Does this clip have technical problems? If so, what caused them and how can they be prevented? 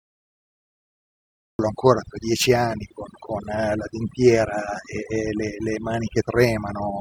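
Yes. Cut-off start at 1.59 s: the first 1.59 s are digital silence, then speech begins abruptly mid-sound with no attack, because recording began late. Start capture a few seconds before anyone speaks.

Overdone noise removal, throughout: aggressive reduction mutes frequency bands near the noise floor, leaving twinkling specks. Use gentler reduction settings, or reduce background noise at the source.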